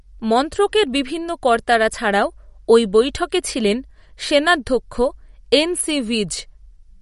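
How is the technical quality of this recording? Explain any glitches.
The recording has one fault, and it is clearly audible. MP3 compression damage runs through the whole speech clip. Nothing is heard above 11.2 kHz. The likely cause is an encoder short of bits, fitting a low rate near 48 kbps. It cut the treble and dropped weak frequency lines frame by frame. The result sounds watery and swirly, with metallic chirps on s sounds and smeared attacks.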